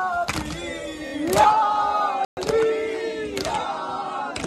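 At 1.06 to 1.11 s the sound stutters, a tiny fragment replaying twice more. These are repeated frames: one compressed block of 26.1 ms was decoded three times, adding 52.2 ms to the audio. At 2.25 s the audio cuts out mid-flow and stays silent for 120 ms before resuming at 2.37 s. This is a playback stall, likely the player running short of data or its output thread being briefly blocked.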